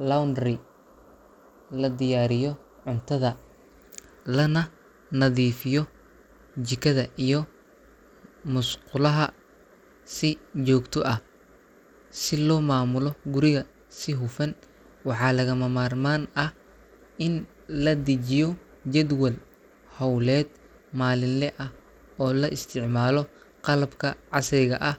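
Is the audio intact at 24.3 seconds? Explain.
No. Periodic USB or driver dropouts run from 22.84 to 24.84 s, which includes 24.3 s. A fraction of a millisecond of audio is skipped every 0.5 s, so the blocked bus or driver leaves a small, evenly spaced tick in the speech, about five in all.

The treble is also thin and flickering, with a gritty edge, throughout the clip. This is likely Bluetooth SBC compression at around 96 kbps, where a small bit pool starves the upper sub-bands and coarsely quantises the rest.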